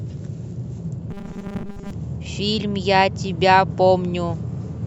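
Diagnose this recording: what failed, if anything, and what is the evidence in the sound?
From 1.1 to 1.9 s the speech turns into a rigid, metallic buzz fixed at 200 Hz, still loosely tracking the syllables: robotic sound from repeated short buffers. The stage is likely driver or buffer underrun. When fresh samples fail to arrive, the last short block is replayed instead, and its 5 ms period imposes the 200 Hz pitch. Roughly 70% of that stretch is repeated material, so most of the real audio there is skipped.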